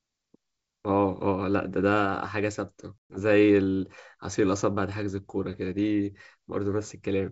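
Packet loss on an ADPCM call at 3.09 to 3.18 s drops several packets, about 120 ms, to hard-edged silence; the desynchronised decoder predictor brings speech back slightly distorted.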